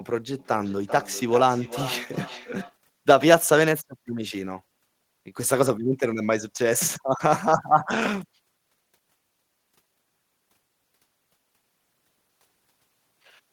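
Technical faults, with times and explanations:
0.39–2.79 s, feedback echo between two devices: the speech comes back round at a steady interval of roughly 400 ms, peaking at about 13 dB below the direct speech. That's two devices in the same room on the same call, with one playing out what the other's mic sent. The mic then picks that playback up again, and its echo canceller can't remove it because it only cancels what its own device is playing.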